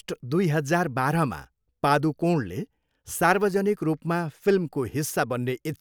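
No technical faults can be heard in this speech recording.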